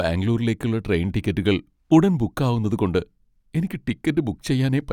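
Spoken audio, and no technical faults can be heard.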